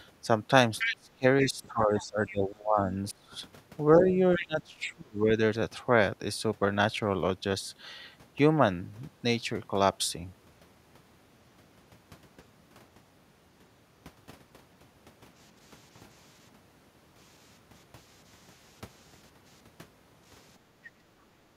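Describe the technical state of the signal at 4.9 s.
At 4.9 s you're inside a stretch of speech suppressed in double talk, running from 3.98 to 5.32 s. The voice dips hard, at worst around 25 dB, and is affected for about a second in total. The likely cause is an echo canceller treating both talkers as echo and ducking them together.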